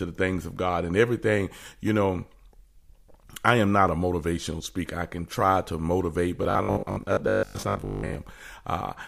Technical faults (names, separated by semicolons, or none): robotic sound from repeated short buffers